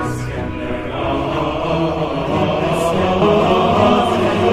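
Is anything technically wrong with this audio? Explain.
Yes. Damaged data in a compressed stream at 3.21 s: corrupted bytes make the decoder misread a frame, lose sync and hunt for the next valid frame header. It comes through as a brief blip lasting about 16 milliseconds.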